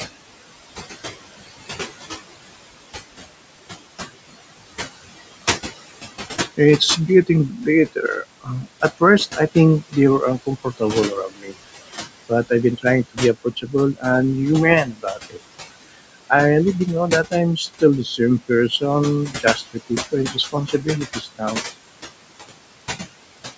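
From the start, the background noise dips away whenever the talker pauses and swells back up beneath each phrase. These are noise suppressor artifacts: the room noise sits only about 11 dB below the speech, and the suppressor pulls each band it judges to be steady noise down by about 20 dB, frame by frame, so the residue pumps rather than staying still.

Between 6.28 and 11.55 s, parts of the speech turn faint and swallowed, about a second's worth in total, with the deepest drop about 21 dB. Further losses follow between 11.95 and 14.05 s (roughly half a second, about 20 dB), 14.85 to 15.38 s and 17.3 to 18.83 s (each a fraction of a second, about 17 dB), and 19.29 to 21.6 s (around a second, about 18 dB). This is speech cut by the noise suppressor, which mistook soft passages for background noise and turned them down with it.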